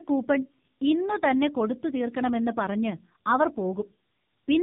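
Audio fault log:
Throughout: tandem speech coding. The speech sounds rough, muffled and warbly. It points to two narrowband mobile coding stages in a row, each working on the previous one's damaged output. Errors build up. Nothing is heard above 3.7 kHz.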